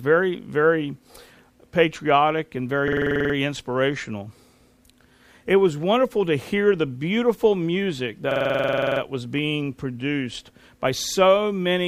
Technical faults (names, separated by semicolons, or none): system hang loop